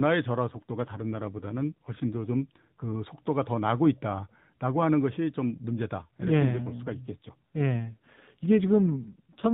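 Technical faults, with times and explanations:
0.50–2.96 s and 5.98–9.49 s, AMR rate drop: speech turns rougher and more synthetic at unchanged bandwidth, consistent with the codec falling from 12.2 to about 5.9 kbps.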